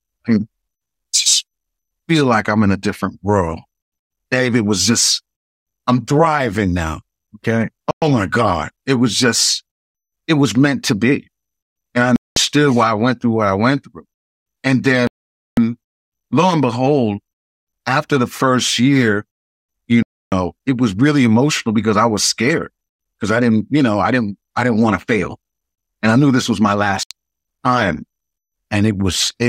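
Speech playback drops to silence five times, at 7.91 s (110 ms), 12.16 s (203 ms), 15.07 s (499 ms), 20.03 s (294 ms) and 27.03 s (75 ms), resuming each time; these are likely Bluetooth stalls, where delayed packets let the headphone buffer run empty.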